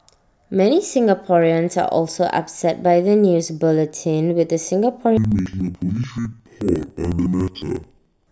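Interleaved audio read as planar runs from 5.17 s to the end, 8.32 s. Each 72 ms block of alternating left-right samples is split in half and played at half speed, so the speech drops an octave, sounds doubled, and chops at 13.9 Hz.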